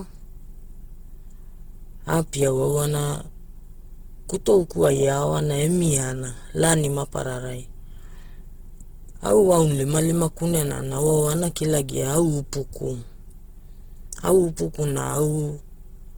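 From start to finish the speech sounds rough, grainy and noisy, with the damage plainly audible, the likely result of Opus compression in its music-oriented CELT mode at a rate around 16 kbps. Bands starved of bits are filled with noise or folded copies, so a spectrogram shows energy extending to 20.2 kHz but smeared and speckled, with few clean gaps.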